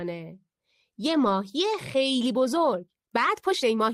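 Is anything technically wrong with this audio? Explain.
Yes, there are two problems.

From 1.25 to 1.31 s there's a lost packet rebuilt from error correction. About 40 ms of audio went missing, which fits two lost packets. Each following packet carried a low-bitrate backup copy of the missing one, so the decoder played those instead of leaving silence. You don't hear a dropout, but that stretch turns rougher and grainier for a moment before the full-quality stream picks up again.

From 1.82 s to the end, the speech is a time-stretched section, sped up to about 1.41 times its original pace. The pace jumps suddenly while the pitch stays put. That's the signature of software compressing the audio to fit a length, likely by cutting out tiny slices and splicing the rest together to keep the pitch. So the tail end sounds rushed.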